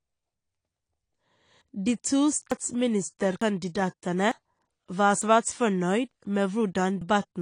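Low-bitrate audio saved at a high bitrate runs through the whole speech clip. The file is a high-rate MP3, yet nothing is present above 10.2 kHz, and the artefacts of a heavily squeezed first encoding remain. This points to a source that was likely coded at around 32 kbit/s, perhaps AAC, then re-saved at 320 kbit/s. The second pass preserves that damage faithfully but cannot rebuild the missing top end or smooth the artefacts.

Audio missing between chunks appears as abrupt skips at 1.62, 2.52, 3.42, 4.32, 5.22, 6.12 and 7.02 s. Each one drops roughly a tenth of a second, and the surrounding sound is spliced straight together with no silence, so speech jumps forward mid-flow. The steady 0.9 s spacing fits a process handling one-second chunks and likely losing a short slice each time it closes one block and opens the next.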